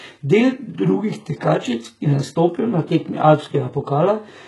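A speech clip whose treble sounds false from start to finish: the s sounds come out gritty and lispy, with a metallic sheen, and nothing at all reaches above 11.5 kHz. This heavy damage is likely HE-AAC compression at a very low rate, one that fits a bitrate of around 12 kbps. Only the lower spectrum is truly coded, and the upper bands are copied up from below and shaped to a coarse envelope, so their harmonics no longer line up with the real voice.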